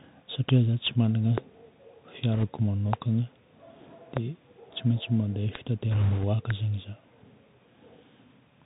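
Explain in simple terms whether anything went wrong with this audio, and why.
Yes, a few things went wrong, and they stack on top of each other.

The whole recording has gone through a Bluetooth CVSD headset codec, the old phone-quality format headsets use for calls. It describes the sound one tiny up-or-down step at a time, so it can't keep up with sharp, bright sounds. Everything above about 4 kHz is simply gone, which makes the speech sound boxy and muffled. S sounds come out scratchy, and there's a grainy hiss sitting underneath the whole time. It's very noticeable here, not subtle.

On top of that there are six loud pops, each a short sharp crack that jumps well above the speech, which carries on underneath. They land at 0.49 to 0.51, 1.38 to 1.40, 2.93 to 2.95, 4.17 to 4.19, 5.55 to 5.57 and 6.50 to 6.52 seconds. They're likely caused by a sudden electrical jolt, something like a loose plug, a switch, static or a driver hiccup, briefly kicking the signal.

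Finally, there are two patches of bit errors on a Bluetooth voice link, where the wireless connection garbled a share of the data. Because every bit in this format carries only a tiny nudge, the damage shows up as a rushing, crackly noise smeared over the speech, not as clicks. The first patch is short, from 2.34 to 2.44 seconds. The second is longer and rougher, from 5.91 to 6.25 seconds, because more of the data got scrambled there.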